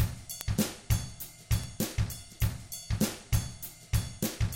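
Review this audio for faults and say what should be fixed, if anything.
Three bit error spikes occur, at 0.41 s, 1.64 s and 4.26 s, each a single corrupted sample reaching about -5, -17 and -11 dBFS respectively. A flipped bit throws that one sample's value up by a power of two before it drops straight back, so each is heard as a hard tick unrelated to the surrounding sound. On a waveform each shows as a lone vertical needle; on a spectrogram, a thin full-band vertical line. Error-checked transfer and storage would prevent this.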